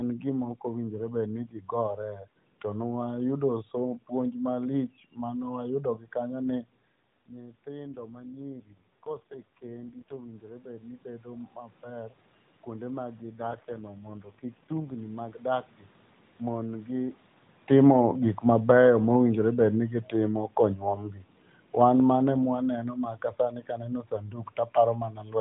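Speech over a narrowband mobile link, with two kinds of trouble. The first is an AMR rate drop, heard twice: from 7.84 to 10.34 s and again from 13.22 to 14.96 s. The band doesn't narrow and nothing cuts out, but the voice goes rougher and more synthetic, then cleans up when the rate recovers. That fits the link stepping down from the 12.2 kbps mode to 4.75 kbps, with the freed bits spent on error protection. The second is automatic gain falling, from 17.64 to 22.54 s. The AGC found the input too loud, or its background too strong, and eased its gain down by about 6 dB, so the speech and the room noise behind it sink together, smoothly. That shared drop in the background is what separates it from the talker shifting position at the mic around 17 s, where only the voice changes level.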